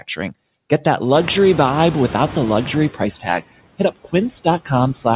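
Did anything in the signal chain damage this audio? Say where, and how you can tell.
Yes, in the call processing stage. Noise suppressor artifacts run through the whole clip: the suppressor pulls the steady background down by about 20 dB, frame by frame in each band, so the noise sinks in the gaps and swells back under the speech. Bands the suppressor judges to be noise are attenuated even while someone is talking.

Speech cut by the noise suppressor occurs at 0.00 to 0.33 s and again at 3.78 to 4.14 s. In each span, roughly a tenth of a second of speech is treated as noise and turned down with it, by up to about 9 dB in the first case and about 20 dB in the second. Soft consonants or word endings there sound swallowed. The level drops rather than the sound breaking up, which points to the suppressor's gain decision rather than a dropout.

The noise suppressor is catching up from 1.14 to 2.90 s. 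The room noise jumps by about 23 dB around 1 s, and the suppressor's noise estimate lags behind. For those 1.76 s the new noise gets only about 8 dB of reduction, so it comes through louder before sinking as the estimate adapts. The band limit at 4 kHz from the G.711 mu-law path is the codec's normal narrowband behaviour, not part of this.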